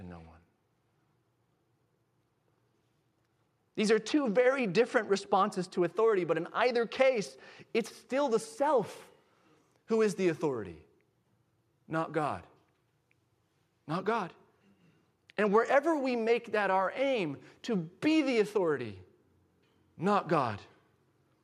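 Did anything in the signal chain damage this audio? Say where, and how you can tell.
No, nothing in the signal chain audibly damaged this speech recording at any stage.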